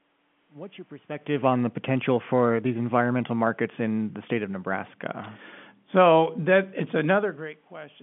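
The clip is speech, and nothing is technically wrong with it.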